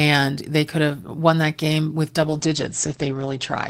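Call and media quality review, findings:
Speech turns muffled and rough from 2.23 s, right after "won that game with", to the end of clip. Call bitrate drop in Opus encoder: rate cut from 32 to 10 kbps, audio band narrowed from 20 kHz to 8 kHz, lowest level held for 1.12 s.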